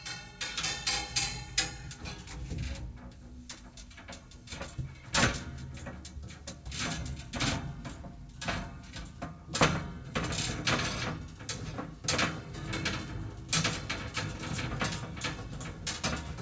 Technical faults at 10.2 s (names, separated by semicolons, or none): none